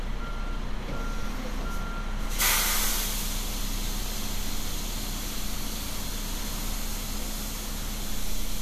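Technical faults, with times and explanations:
No technical faults are audible anywhere in this audio.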